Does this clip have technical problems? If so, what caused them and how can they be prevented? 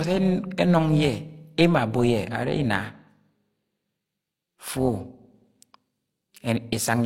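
Yes. Throughout the speech there is a metallic, robotic buzz with extra tones around the voice, a ripple at around 300 Hz with level swings of about 6 dB. This is overlap-add ripple. The audio was split into windowed frames and rejoined with an overlap whose windows do not add up to a constant gain, so the level pulses once per frame. To prevent it, pick a window and hop size that satisfy the constant-overlap-add condition, such as a Hann window at 50 percent overlap.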